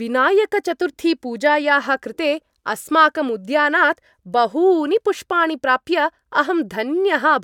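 No technical faults can be heard in the speech, so there is nothing to describe in time order.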